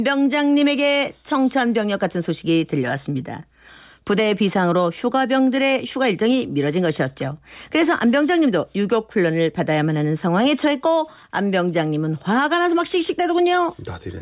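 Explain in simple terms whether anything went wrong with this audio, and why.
Nothing went wrong here.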